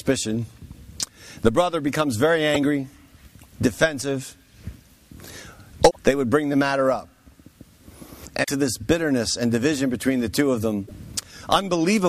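Four short hits of damaged data in the compressed stream, at 2.54 to 2.57 s, 5.87 to 5.97 s, 8.40 to 8.49 s and 10.83 to 10.91 s. Each is brief, the first very quick and the rest closer to a tenth of a second. What's happening is that corrupted bytes make the decoder misread those frames, lose sync and then hunt for the next valid frame header before the sound settles again.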